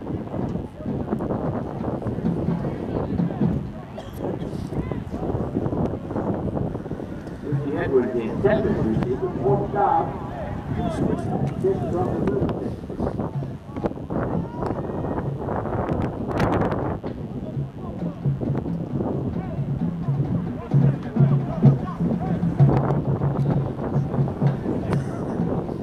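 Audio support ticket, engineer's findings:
Mains buzz, throughout, 0 to end. Steady raspy buzz on a 50 Hz base, harmonics climbing into the kHz range, sitting around 30 dB under the programme. Sharp switching spikes, two per mains cycle. Probable source: dimmer, rectifier or unshielded cable coupling into the signal path.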